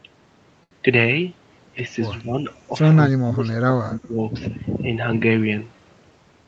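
From 0.63 to 0.73 s, a short stall from a late packet holds one sound for 77 ms. The jitter buffer ran dry and stretched it. Nothing is lost.

At 2.22 to 2.34 s, 3.08 to 3.48 s and 3.68 to 4.17 s, the voice dips by about 5, 20 and 25 dB. This is likely speech suppressed in double talk, with the echo canceller ducking the talker while the far side spoke.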